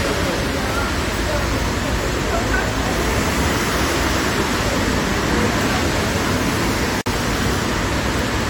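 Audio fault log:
7.01–7.06 s, gap at a join of encoded pieces: the sound drops out for about 50 ms and then resumes exactly where it stopped, as if the material had been cut and spliced with a short hole between. The two pieces were encoded separately and joined without trimming. The encoder's start-up delay and the padding in the previous piece's last frame both remained as silence. The codec softens the abrupt edges of the gap.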